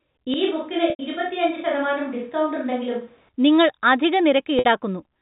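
From 0.34 s to 3.29 s, the sound likely switches to a distant microphone, replacing the close one. It turns suddenly roomy and hollow, thinner in the bass, a few decibels quieter, with faint background noise well below the speech, and then snaps back. At 0.90 s, packet loss with pitch repetition bridges a 90 ms gap, which fits three lost 30 ms packets. The last pitch period repeats as a brief buzzy hold, fades into silence, and the audio returns through a short cross-fade. The same happens at 4.59 s across 60 ms, which points to two lost packets. Throughout, the G.711 telephone path keeps everything below 4 kHz.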